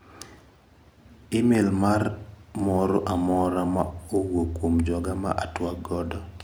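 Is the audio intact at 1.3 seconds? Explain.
Yes, the audio is intact at 1.3 seconds, with no dropout, click, distortion or other technical fault at that moment.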